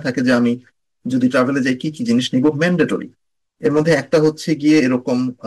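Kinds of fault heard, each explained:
Hard clipping: the speech is driven about 5 dB past the limit, so peaks are sliced flat, adding crackle on roughly one percent of the sound.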